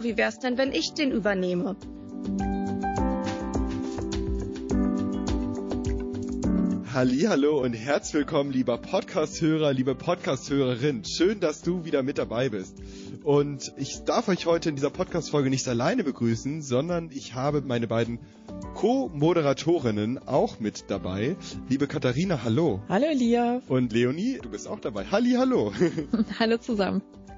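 Throughout the audio, heavy lossy coding, likely MP3 at a rate that fits about 32 kbps, drops weak frequency lines frame by frame, leaving a watery, swirly texture with metallic chirps on bright sounds and smeared attacks.

From 20.72 to 20.75 s, pre-echo appears. The encoder spread its quantisation noise across a long block without switching to short blocks, so the noise meant for a sharp attack leaks about 27 ms ahead of it, rising by about 13 dB. This is heard as a brief hiss before a softened onset.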